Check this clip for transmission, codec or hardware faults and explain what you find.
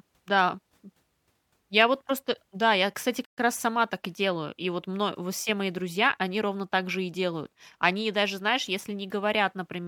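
One transmission fault affects the speech: a stream reconnect at 3.25 to 3.38 s. The link dropped, leaving about 114 ms of silence, then a fresh decoder picked up the live stream roughly a tenth of a second further on. Unlike a plain dropout, the speech jumps ahead rather than resuming where it stopped.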